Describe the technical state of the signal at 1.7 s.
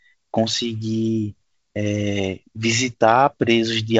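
At 1.7 s the speech is intact, carried by G.722 wideband telephone coding at 56 kbit/s with its light hiss and no content above about 7.8 kHz.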